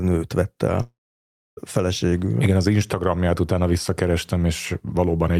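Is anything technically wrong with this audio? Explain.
Yes. From 0.81 to 1.59 s, right after "nőt vett", the speech turns into a fading buzz or hiss, then about 0.64 s of silence, and returns with 0.76 s missing. This is likely a long network dropout: with no audio arriving, the receiver stretched the last sound until it died away.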